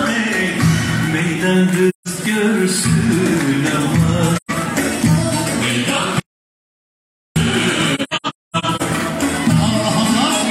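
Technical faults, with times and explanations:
1.89–2.08 s, 4.36–4.51 s and 7.95–8.82 s: AAC frame loss with muting. Lost frames were decoded as zeroed spectrum, leaving soft-faded holes. The last stretch is a scattered run whose longest gap is roughly 0.3 s. On a spectrogram these show as blank vertical bands with tapered edges.
6.20–7.36 s: audio dropout to silence. The sound cuts off abruptly into silence for 1.16 s, with no room tone, likely because the input was lost. On the waveform it is a flat line with hard edges.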